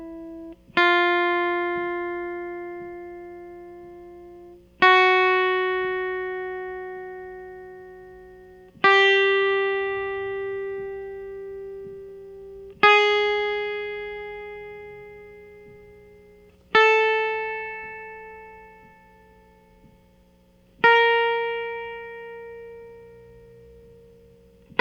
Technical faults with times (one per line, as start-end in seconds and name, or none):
12.09 corrupt FLAC frame